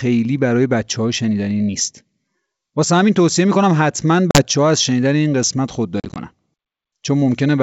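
At 4.31 s, packet loss on an ADPCM call drops about 40 ms of the speech, a handful of packets, leaving a hard-edged silent hole; the decoder's predictor and step size then lose track of the sender's, so the speech resumes slightly distorted before settling. At 6.0 to 6.18 s, about ten packets go missing across 160 ms, 90 ms in total, runs up to 40 ms, giving a stuttering chain of gaps over the clear G.722 wideband sound.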